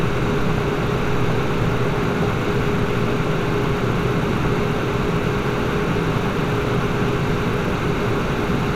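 A recording of everyday sounds is broken up four times by short blips of noise in single sub-bands, from 0.30 to 1.30 s, 2.01 to 2.48 s, 4.76 to 4.99 s and 6.55 to 6.83 s. This is DAB burbling. Weak reception let bit errors, at a rate of a fraction of a percent, slip past error correction into the MP2 data, so corrupted samples put short noise blips into single sub-bands.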